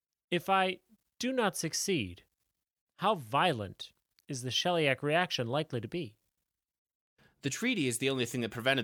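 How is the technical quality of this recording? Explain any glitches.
The recording has no audible glitches or technical problems.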